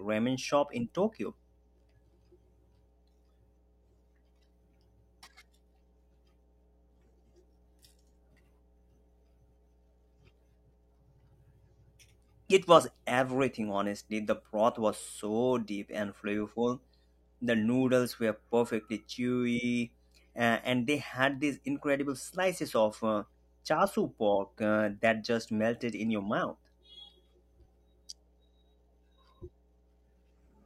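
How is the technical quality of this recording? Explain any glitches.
A steady low hum runs underneath the speech for the entire recording, sitting roughly 35 dB below the speech. This is mains hum at 60 Hz: a ground loop or nearby transformer has let the power line leak into the signal path, producing a constant low tone with some low harmonics.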